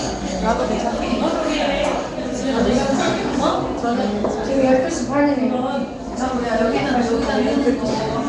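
From start to finish the sound carries a rough, hissy halo with a smeared, underwater blur, and nothing exists above 10.6 kHz. The likely cause is Nellymoser compression at a rate that fits about 44 kbps, starving weak bands and filling them with noise. A spectrogram would show a hard ceiling and blocky, grainy texture.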